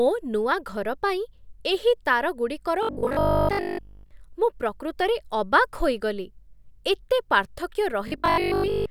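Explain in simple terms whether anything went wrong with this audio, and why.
Robotic sound from repeated short buffers appears from 2.83 to 4.11 s and again from 8.08 to 8.90 s. In both stretches the speech becomes a stiff, metallic buzz at 50 Hz that still loosely follows the talking. The likely cause is new audio arriving too slowly, so the player kept repeating the last tiny slice, about 20 ms long, to fill the gap. Most of the real sound in those moments was skipped.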